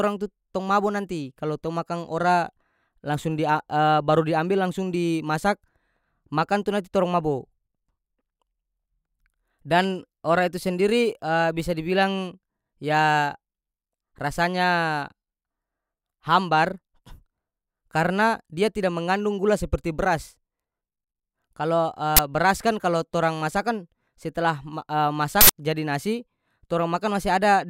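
At 22.17 to 22.19 s and again at 25.41 to 25.49 s the speech is broken by an uninitialised buffer fault: a block was sent to playback before any audio had been written into it, so whatever stale memory it held was played as samples. Each event is a sudden, loud crack or burst of harsh digital noise. The first lasts about 21 ms, which fits a 1024-sample buffer. The second runs about 85 ms, consistent with a 4096-sample buffer.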